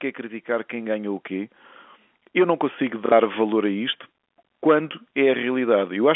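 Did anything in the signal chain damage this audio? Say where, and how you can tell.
Yes. Call processing applied automatic gain rising from 0.46 s to 1.61 s. Over that second or so, the voice and the background noise floor climb together by about 5 dB. A talker getting louder would not lift the room noise as well. This is the gain control judging the input too quiet and raising its gain step by step. On the waveform, the envelope widens steadily across that span. On a spectrogram, the whole 300 to 3400 Hz telephone band and the noise between phrases brighten together.

The network stage shows packet loss with the last packet repeated, from 3.06 s to 3.12 s. It falls right after "não consigo" and just before "valor a isto quando". About 60 ms is missing, which points to two lost packets. The receiver filled the gap by replaying the last packet it had, so the sound stutters briefly instead of going silent. 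The joins rarely line up with the pitch. On the waveform, a short block repeats itself, often with a step at each seam. On a spectrogram, a frozen slice is copied sideways, with vertical lines at the seams.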